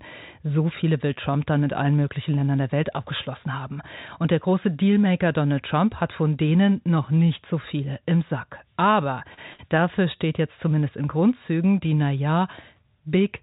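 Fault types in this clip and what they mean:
Short stall from a late packet: Around 9.34 s and again at 9.53 s, the sound briefly hangs, held about 33 ms and then about 52 ms with a faint buzzy smear. A packet arrived late, the jitter buffer ran dry, and the receiver stretched the last audio, then resumed with nothing lost.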